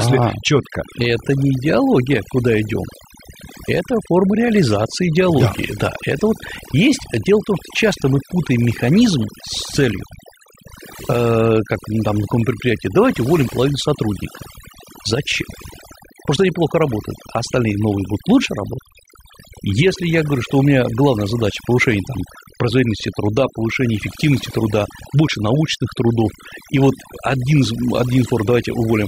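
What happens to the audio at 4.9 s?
Overdone noise removal is at work at 4.9 s, as it is across the whole clip. A noise reduction stage set far too aggressively is pulling individual frequency bands down or shutting them off whenever they sit close to its noise estimate, and the quieter parts of the speech are being cut along with the noise. The background drops and breaks up into twinkling, chirpy specks.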